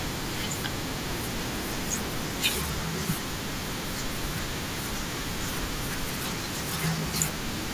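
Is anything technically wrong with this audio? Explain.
No, nothing technically wrong can be heard here.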